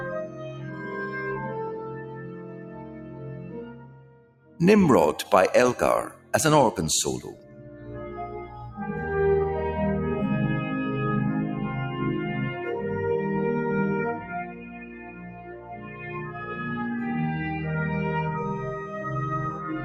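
Across the whole clip a speech-oriented noise suppressor, applied to music or sounds, treats steady content as noise, so the level swings by around 15 dB and the sound pumps. On a waveform the envelope breathes unevenly, and a spectrogram shows sustained bands fading in and out. The sound is cut by the noise suppressor at 0.24–0.89 s, 1.89–4.59 s, 6.16–6.33 s, 7.33–8.17 s, 8.46–8.62 s and 14.44–16.43 s, sinking by about 5 to 9 dB. Held portions and tails thin out there and visibly dim on the spectrogram.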